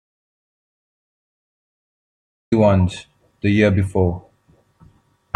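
From the very start until 2.52 s the clip is an audio dropout to silence: silence with no room tone at all, after which the speech enters abruptly mid-flow. The input signal was likely lost while recording continued, so whatever preceded 2.52 s is missing.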